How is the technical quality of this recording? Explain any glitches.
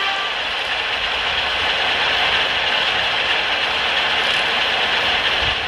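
The recording has three short dropouts. Compressed frames are skipped at 0.30–0.34 s, 1.60–1.62 s and 5.51–5.55 s. Each time, roughly 300, 300 and then 200 ms of audio is missing, which fits whole frames of about 46 ms each. The audio jumps ahead by that much at each point.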